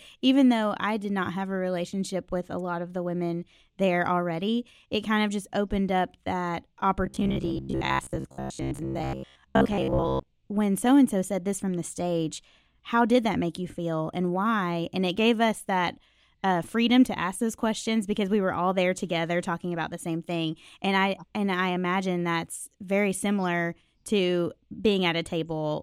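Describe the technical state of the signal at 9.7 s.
At 9.7 s the signal sits inside a stretch of robotic sound from repeated short buffers, running from 7.06 to 10.27 s, between "just opened up that" and "when so and so". New audio is likely arriving too seldom, so the playback fills the gaps by looping a fragment of about 15 ms while most of the real signal is skipped. That looping imposes a fixed buzz at 66.7 Hz, turning the speech into a rigid, metallic drone that only loosely tracks the words.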